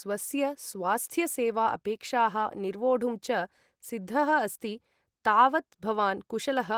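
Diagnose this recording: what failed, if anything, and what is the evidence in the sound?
Nothing failed in this recording, and the sound carries no evidence of a fault.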